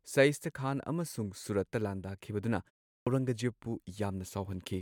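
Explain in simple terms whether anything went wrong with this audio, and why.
One thing went wrong: a clipped start after a pause at 2.96 s. After a short 0.34 s gap, the playback device seems to have dozed off, so the first 106 ms or so of the next bit of speech got swallowed before it woke up.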